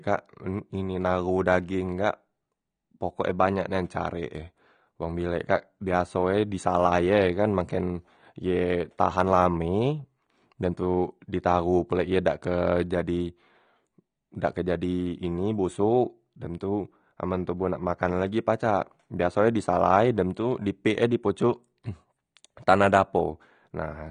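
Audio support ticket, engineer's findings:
Dull, band-limited speech with warbling, fizzy sibilants throughout. Likely cause AAC compression (AAC-LC) on the encode path; damage fits roughly 32 kbps. Encoder lowering cut-off, leaving spectral holes, quantising coarsely per frame, smearing transients.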